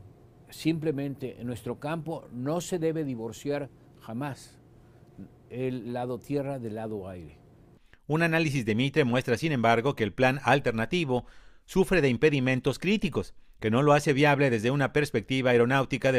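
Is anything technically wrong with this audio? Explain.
No, nothing here sounds technically wrong; it's a perfectly sound recording with nothing that needs fixing.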